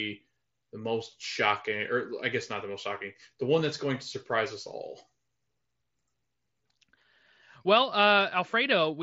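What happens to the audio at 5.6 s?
Nothing goes wrong at 5.6 s; the speech continues intact through that moment, carried over the Bluetooth mSBC headset link with its band limit at 8 kHz.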